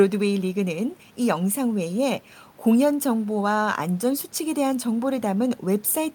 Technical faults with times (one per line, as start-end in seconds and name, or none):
none